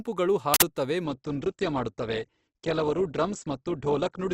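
Speech, hit first by an uninitialised buffer from 0.54 to 0.62 s: an 80 ms blast of harsh, loud digital noise where stale memory was played as samples. It is a dense burst of garbage rather than a single click or a silent dropout. From 1.04 s to the end, the adaptive stream switches to a lower bitrate. Nothing remains above about 8.2 kHz, and codec smearing rises. The switch is abrupt with no gap, unlike a dropout, and the change in quality fits a fall from roughly 64 to 12 kbit/s Opus.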